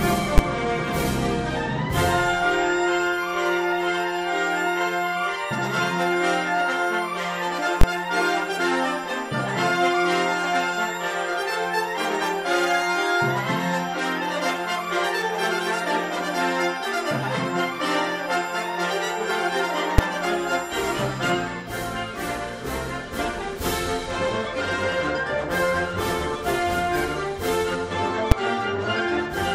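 At 0.38, 7.81 to 7.84, 19.98 and 28.32 s there are invalid numbers at full scale: a calculation blew up and whole blocks got pinned to maximum level, fitting 512, 1024, 256 and 256-sample blocks. Each lands as one sharp, very loud bang.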